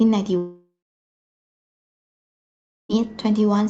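From 0.37 to 2.92 s the speech decays into a fading buzz, then falls silent and resumes with about 2.5 s missing, likely a long network dropout.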